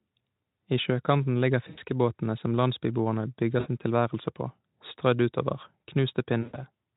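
VoIP packet loss concealed by the speech codec occurs three times, at 1.69 to 1.78 s, 3.59 to 3.67 s and 6.41 to 6.61 s, with gaps of about 80, 60 and 120 ms, which fits 20 ms frames. The decoder fills each gap by repeating its last pitch and spectral shape at falling gain, so the speech smears into a fading buzz or coloured noise. It stays weak briefly after packets resume.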